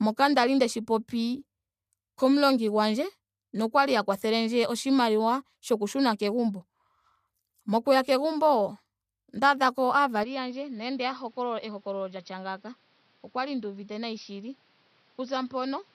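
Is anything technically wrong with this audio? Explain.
Yes. An input switched to a poorer device at 10.23 s and remains for the rest of the clip. The recording likely changed to a different microphone or a headset's call profile partway through, with no gap at the changeover. From that point the speech loses everything above about 5.9 kHz and sounds duller and boxier. The level drops by roughly 10 dB, and a new background noise appears, sitting roughly 30 dB below the speech.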